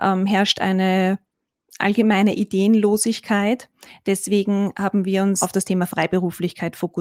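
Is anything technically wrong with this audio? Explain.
No, there's nothing technically wrong that I can hear in this speech recording, so it's fine as it is.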